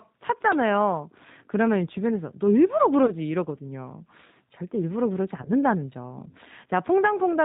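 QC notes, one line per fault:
Throughout, G.729 codec. The speech is rebuilt from a vocal tract filter, a pitch predictor and a few pulses per half frame. It is not a true waveform. The result is slightly rough and synthetic. Nothing above 4 kHz survives, so sibilants sound dull and boxed in. The damage is plainly audible and fits the 8 kbit/s G.729A variant.
3.06 to 3.12 s and 5.42 to 5.52 s, VoIP packet loss concealed by the speech codec. Each gap fits one lost 20 ms packet. The decoder fills it by repeating its last pitch and filter at falling gain. That brief stretch is drawn out and fades. Each frame builds on the previous one, so the sound stays weak and smeared after packets resume. This lasts to about 3.12 s and 5.52 s.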